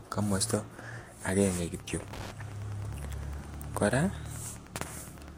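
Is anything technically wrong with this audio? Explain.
Yes. From 1.79 s to the end of the speech, Wi-Fi interference is audible. A nearby Wi-Fi radio's signal is rectified in the audio circuit. Its beacon repeats every 102.4 ms. This gives a steady ticking about ten times a second, roughly 20 dB below the speech.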